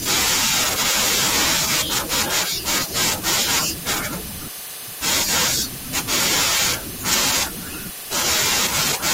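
At 0.83 to 0.85 s, a corrupt frame was decoded: bit errors in what sounds like a single compressed frame were played through, so misread gains and codes put energy at the wrong frequencies. It is heard as a brief burst of misplaced sound in the speech, peaking around -15 dBFS.

At 7.11 to 7.15 s, compressed frames were skipped: damaged or missing data was never played, so the speech jumps ahead by roughly 20 ms.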